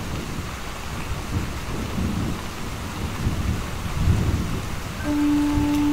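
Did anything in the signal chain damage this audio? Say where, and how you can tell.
No, nothing in the signal chain audibly damaged this audio, and I hear no stage where the signal was degraded.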